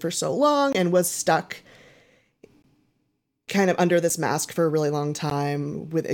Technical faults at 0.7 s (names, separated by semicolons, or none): block of digital silence